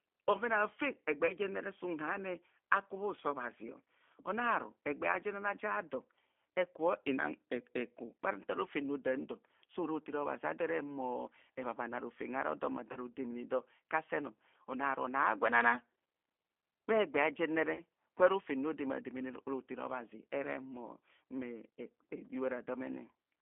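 Throughout, the speech passes through the G.729 codec, rebuilt from a few pulses per frame at a rate that fits 8 kbit/s, leaving a narrow 250 Hz to 3.4 kHz band and a plainly rough, synthetic texture. At 1.27 to 1.33 s, 12.92 to 12.97 s and 17.75 to 17.82 s, VoIP packet loss concealed by the speech codec fills each gap by extrapolating the last frame. The first two gaps fit a single lost 20 ms packet and the third fits two. The speech smears into a brief buzzy tone or coloured noise that fades.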